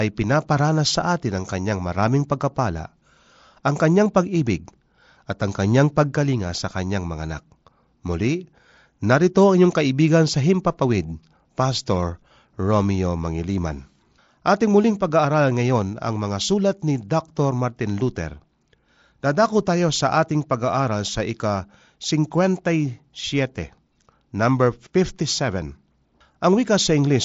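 No technical faults occur at any point in this speech, which comes through a Bluetooth mSBC headset link with nothing above about 7.7 kHz.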